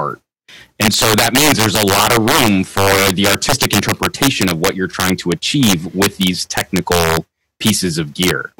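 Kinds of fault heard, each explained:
Integer overflow: peaks pushed about 6 dB past full scale wrap to the opposite sign, so a small fraction of samples crack violently, far harsher than clipping's flattening.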